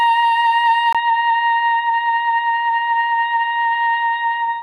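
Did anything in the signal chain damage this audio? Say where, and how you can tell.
Yes. At 0.93 s the music drops out for about 20 ms, then resumes dull and boxy through the end, with nothing above 4.3 kHz. The level stays about the same, but a new noise floor sits roughly 50 dB below the music. On a spectrogram, the upper bands end in a sharp horizontal edge after a thin vertical gap. The waveform shows only that brief gap. At the capture stage, this is likely an input switched to a poorer device with narrower bandwidth.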